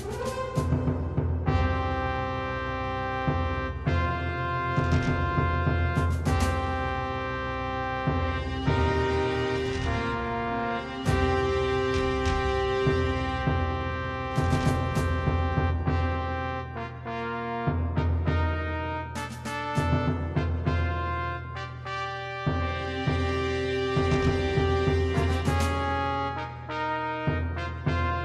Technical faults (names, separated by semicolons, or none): none